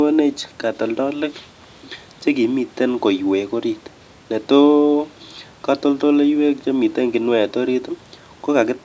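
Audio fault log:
Nothing stood out on listening to this speech recording.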